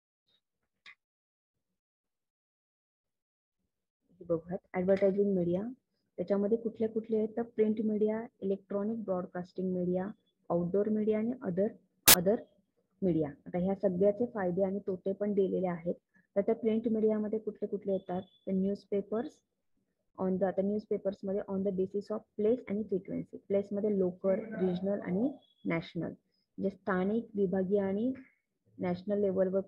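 At 12.08 to 12.14 s, file tags played as audio: embedded cover-picture data decoded as samples, giving very loud white noise with hard edges, unlike a soft-edged codec glitch.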